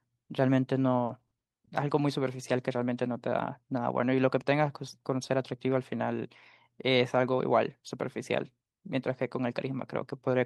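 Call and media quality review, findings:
Repeated packet loss (robotic sound), 1.05 to 1.69 s in speech. Choppy texture with pieces missing. Four short dropouts, longest 40 ms, about 140 ms in total, roughly a fifth of the stretch. Probable component: network path and jitter buffer, with packet loss concealment active. Each hole is filled by extending the preceding sound, and the next loss follows closely, so the original audio in the patched stretches is gone.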